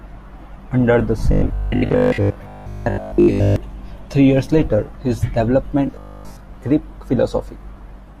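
Audio likely arrived too seldom, so short buffers of about 20 ms were replayed while most of the real speech was skipped. From 1.32 to 3.56 s and again from 5.87 to 6.41 s this gives robotic sound from repeated short buffers: a rigid, metallic 50 Hz buzz that still roughly follows the speech.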